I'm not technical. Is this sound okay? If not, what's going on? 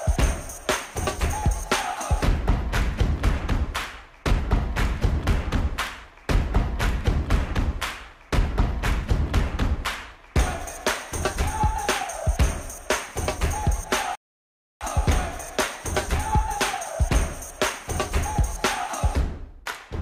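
No. At 14.15 s the audio stops dead for about two-thirds of a second, then carries on at 14.81 s. This is a rebuffering stall: the player ran out of downloaded audio and waited. Unlike a dropout, nothing is skipped, and the sound picks up exactly where it paused.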